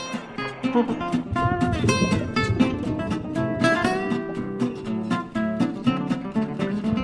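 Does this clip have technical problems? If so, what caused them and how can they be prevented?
No, no audible technical faults.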